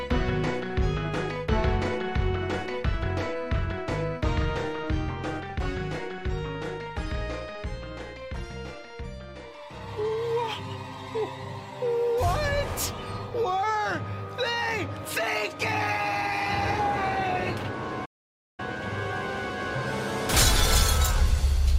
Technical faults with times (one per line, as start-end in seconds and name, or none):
18.05-18.60 playback stall